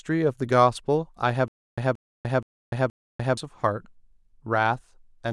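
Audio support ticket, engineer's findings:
Stutter with silent gaps, 1.48 to 3.37 s. A 178 ms fragment of speech repeats 4 times, with 295 ms of digital silence between repeats. The period is 473 ms. The likely cause is a playback stall that replays the last buffer on each retry. The audio in between is lost.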